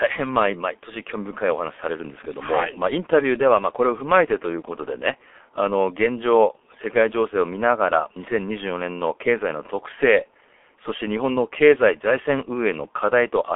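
G.723.1 codec damage runs through the whole speech clip. The sound points to a rate near 6.3 kbit/s, with content held to a 300 Hz to 3.5 kHz line band and nothing above 3.6 kHz. Heavy coding leaves the speech muffled and hoarse, with smeared consonants.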